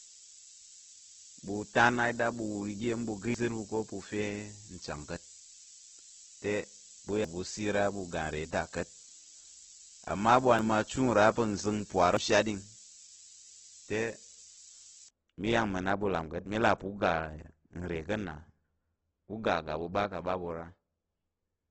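From the start until about 15.1 s there's low bit depth with noise shaping: a steady, thin hiss sitting almost as loud as the speech, climbing sharply toward the top of the band. It fits roughly 6-bit audio with the rounding error pushed upward in frequency.

Within that stretch there are dropouts at 3.34, 7.25, 10.59 and 12.17 s. At each, the speech jumps ahead by about a tenth of a second, no gap, just a splice. That's likely a dropped buffer (overrun), where samples got overwritten before being read.

Across the whole clip the speech is grainy and rough, with nothing above about 8 kHz. That's likely heavy Opus compression in its CELT music mode, which fits a very low rate around 12 kbps, with bands filled by noise rather than left empty.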